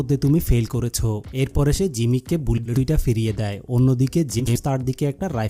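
At 2.58 s, and again at 4.39 s, you get a quick garbled flutter, about 0.2 s each time. That's frames out of order: two adjacent 80 ms blocks got swapped and decoded in the wrong sequence, which fits runs of four frames each. So each stretch plays with its halves exchanged. Nothing's actually lost, just shuffled.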